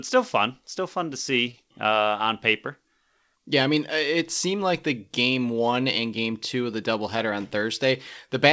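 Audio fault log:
1.10 to 1.97 s, scattered short gaps: right after "still fun still fun", about five brief packet losses are patched by extending the preceding sound, causing tiny ticks and smears. On a spectrogram they appear as short, blurred vertical slivers.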